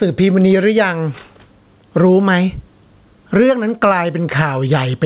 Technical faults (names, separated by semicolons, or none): gain pumping